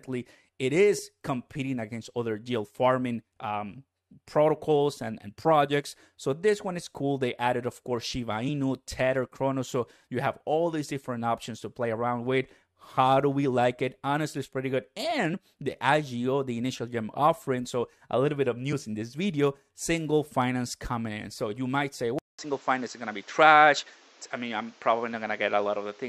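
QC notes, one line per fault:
0.98 s, 8.48–8.50 s, 15.33 s, 18.72 s: damaged data in a compressed stream. Brief glitches just before "competing against other deal" and right after "it's pretty good", where corrupted frames made the decoder lose sync and search for the next frame header.
22.19 s to end: input switched to a poorer device. After "you might say" comes a 200 ms gap, then duller sound with nothing above 7.7 kHz, a level shift of roughly 5 dB, and new background noise about 30 dB down, likely from a change to a narrower-band input device.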